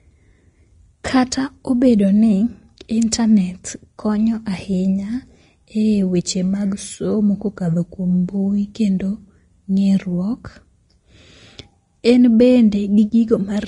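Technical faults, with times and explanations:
Throughout, Vorbis compression: the speech stops dead above 10.6 kHz, and the treble sounds hissy and grainy, with roughened tones and blurred onsets. The likely cause is low-bitrate Vorbis coding, consistent with roughly 32 kbps, where coarse quantisation turns fine detail into noise.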